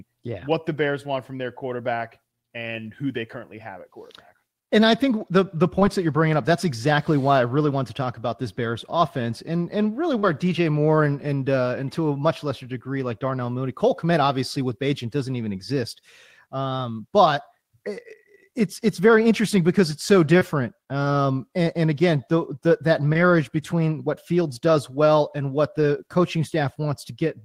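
Short concealed packet loss at 10.19 to 10.25 s, right after "offense and and really": about 40 ms of the call arrived too late to decode, so the receiver extended the preceding sound to cover the gap before blending back. It comes across as a brief smear or wobble.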